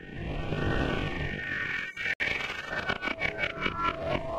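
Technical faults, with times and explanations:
2.14–2.20 s, Bluetooth stall: the wireless link most likely had packets held up by radio interference, so the headphones' playback buffer ran empty and output halted until the retransmitted data arrived. The sound drops abruptly to a dead silence lasting 65 ms, a hard gap with no fade on either side, and then the sound resumes just as abruptly once the buffer has audio to play again.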